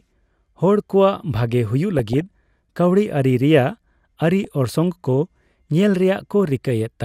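DAB burbling breaks into the speech three times: 1.99 to 2.55 s, 4.44 to 4.76 s, and 6.19 to 6.67 s. Bit errors at a fraction of a percent slip past error correction into the MP2 data: corrupted samples put short blips of noise in single sub-bands, and corrupted scale factors make sub-bands jump in level for up to a frame. On a spectrogram it appears as scattered, blocky horizontal patches flickering on and off, and the waveform shows ragged bursts.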